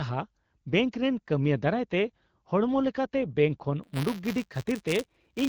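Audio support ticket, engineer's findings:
Buffer tearing, 3.83 s to end: steady robotic buzz at 172 Hz over the speech, fitting a 256-sample buffer. Ring buffer writer and reader slipped, so each period replays a small slice about 10 ms stale, with hard joins.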